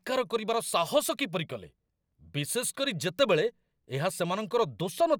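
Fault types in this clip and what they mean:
No technical faults can be heard in this recording.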